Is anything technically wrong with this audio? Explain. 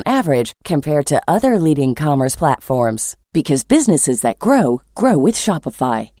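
Yes. Small hiccups recur across the whole speech clip, giving it a faintly unsteady, slightly hurried tempo. The cause is clock drift between sender and receiver. The sending side's audio clock runs fast, by roughly 4 percent, so samples arrive quicker than the receiver plays them out. Its jitter buffer keeps filling up, and the receiver has to shed audio again and again to keep the delay from growing.

From 0.03 s to 6.2 s, the clip carries repeated timing corrections. They are heard as brief skips at uneven intervals, each too small to register as a dropout but together making the pacing feel nudged forward. The receiver is trimming short pieces out of the stream to match a sender running at 104 percent speed. Every edit goes the same way, a cut rather than a repeat, which is why the speech seems clipped along rather than stretched.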